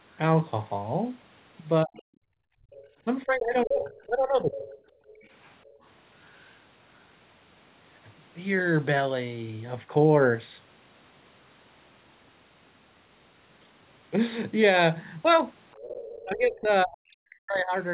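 At 1.84 to 1.94 s comes the first speech suppressed in double talk. The voice dips by about 40 dB for a tenth of a second, likely because the echo canceller mistook overlapping talk for its own loudspeaker echo and attenuated everything. From 1.96 to 2.8 s the other side's voice is leaking through, faint, about 25 dB below the talker. This is likely residual echo the canceller failed to subtract. Between 2.22 and 2.97 s the background is gated by the echo canceller. Room tone drops by about 29 dB for most of that span while the loudspeaker is active, then returns.

From 3.05 to 4.7 s the talker is again suppressed in double talk, losing level by about 25 dB over roughly 1.5 s in total. The likely cause is the same misjudged overlap. Overlapping this, from 3.85 to 6.55 s, the far voice leaks through at about 20 dB under the speech, likely left over by incomplete cancellation. From 4.98 to 5.82 s the background is gated once more, sinking by about 18 dB for under half a second.

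At 15.72 to 16.23 s another stretch of the other side leaks through at about 20 dB down, likely uncancelled echo. From 16.24 to 17.76 s the talker is suppressed in double talk by up to about 40 dB over roughly 1.5 s, with the canceller's attenuation likely triggered by that overlap. The whole clip stays band-limited below 4 kHz, which fits a narrowband G.711 call.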